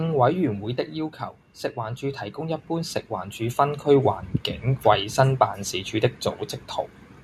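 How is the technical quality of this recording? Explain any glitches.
Two level faults affect the recording, both from automatic gain control working on the speech in opposite directions.

Automatic gain falling runs from 0.05 to 1.23 s. The gain control judged the incoming level too high and pulled its gain down step by step, by about 6 dB across that stretch. You hear the speech start loud and then gradually sink. The room background drops by the same amount, which shows the change comes from the gain stage and not from the talker.

Automatic gain rising follows from 1.75 to 4.26 s. Here the control decided the input was too quiet and raised its gain, by about 8 dB over roughly two and a half seconds. The speech swells slowly louder, and the background noise swells with it in lockstep. That shared rise gives it away as an automatic adjustment and not a natural change in speaking level.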